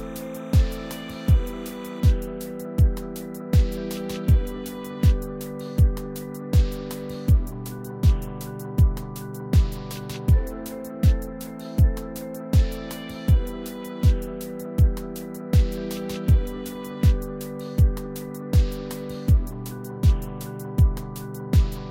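From 0.0 to 2.0 s there is timecode bleed. Linear timecode from a nearby track or cable has leaked into the audio path. The code is a square wave that flips between two pitches, near 1 and 2 kHz. It sits well under the main sound, roughly 25 dB down. It comes across as a steady, chirping warble in the background. Its rhythm fits code running at 30 frames per second.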